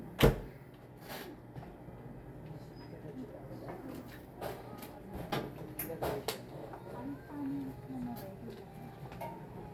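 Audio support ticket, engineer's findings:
Chunks out of order, 5.30–5.32 s: brief jumbled blip. One 10 ms chunk arrives one chunk late, swapping two adjacent blocks in the buffer or write path. Waveform shows three hard discontinuities; spectrogram shows three thin vertical broadband streaks.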